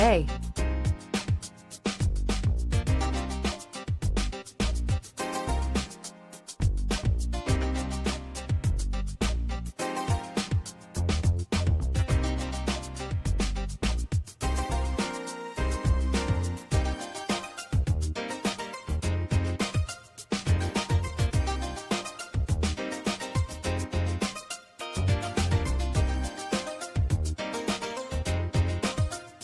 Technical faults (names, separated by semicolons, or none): none